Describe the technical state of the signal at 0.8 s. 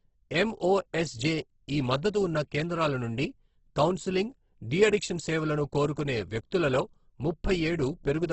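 Opus compression at 0.8 s, present across the whole clip: the speech sounds heavily coded, with nothing above 8.2 kHz and a rough, grainy texture, likely from Opus music-mode coding at a very low rate (fitting roughly 12 kbps), where starved bands are filled with folded or noise-like content.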